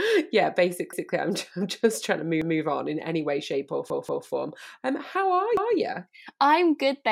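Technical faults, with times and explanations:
0.93 s, 2.42 s, 3.90 s and 5.57 s: repeated buffer. Late audio left the device replaying its last 186 ms chunk, once each time but twice at 3.90 s after "any way shape or". This stutter fits an 8192-sample buffer. Spectrograms show identical adjacent blocks split by hard vertical seams.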